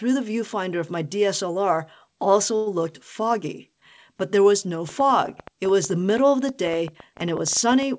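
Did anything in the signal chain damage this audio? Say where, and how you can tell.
Yes. At 2.56 to 2.68 s, just before "looked foggy", there is a call audio freeze at the network and jitter-buffer stage. For about 0.1 s the last sound is stretched into a fading buzz. Then the audio resumes where it left off, so nothing is lost but everything after runs about 102 ms later. On a spectrogram this shows as a smeared horizontal streak fading out. The likely cause is packets held up in transit that emptied the jitter buffer.

From 4.89 s to the end, starting right after "there was no", a train of clicks sits over the sound, pauses included. They arrive at about 9 per second with uneven spacing, and their peaks reach about 5 dB above the signal. On the waveform they are sharp, similar-shaped spikes. On the spectrogram they are thin vertical broadband lines running up to the 8 kHz ceiling of the G.722 call path. 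The likely source is electrical interference in the analogue wiring or a faulty connection or power supply.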